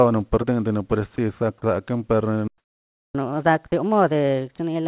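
At 1.16 s the speech briefly gives way to a short burst of steady, flat noise, most likely sound dropped by the voice detector, which mistook a quiet moment for background and let comfort noise stand in. Unlike a stall, the gap is filled with hiss rather than dead silence.

From 2.48 to 3.15 s the output goes completely silent for about 0.67 s, a playback stall, likely from the player running out of data. The sound then resumes where it broke off. What sets it apart is the true silence and the longer duration.

From 3.15 s to the end, a catch-up at higher speed plays the backlog at 1.25 times normal speed. Pitch rises by roughly four semitones along with tempo, so the speech sounds hurried and higher, a shift neither dropout on its own would cause.

Within that sped-up stretch, 3.68 to 3.72 s brings another brief patch of steady noise, again most likely sound dropped by the voice detector. 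Everything sits inside the call path's band limit, with nothing above 4 kHz.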